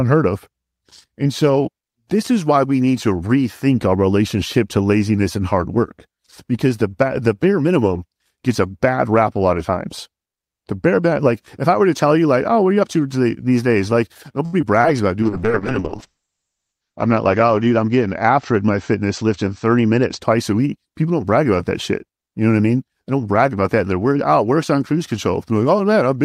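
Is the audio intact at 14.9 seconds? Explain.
No. Between 14.81 and 14.97 seconds there is a brief smear in the speech, a wobble where the sound seems held over rather than moving on. This is short concealed packet loss: about 20 ms of audio never arrived in time, so the receiver synthesised 26 ms of continuation from the preceding sound and faded back into the real signal, which leaves the passage stretched by roughly 15 ms.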